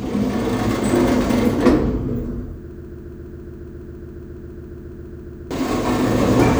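A clip of sounds with a broken-record loop from 2.71 s to 5.51 s: a snippet about 0.14 s long plays back to back, identically, around 20 times, so you get a stutter instead of whatever should have followed. The likely cause is the player, encoder or stream stalling and re-sending the last fragment it had buffered. Those roughly 2.8 s of real audio are simply gone, not hidden under the loop.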